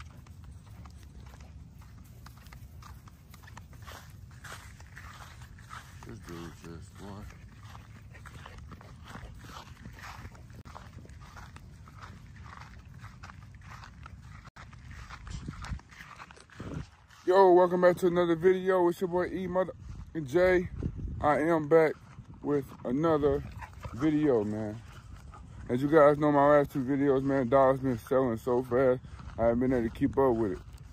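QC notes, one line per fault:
10.61–10.66 s, Bluetooth stall: sound drops to silence for 41 ms, then resumes, likely because delayed wireless packets let the headphone buffer run empty.
14.49–14.56 s, Bluetooth stall: a longer 78 ms gap of silence before audio picks up again, likely from interference holding back packets until retransmission refilled the buffer.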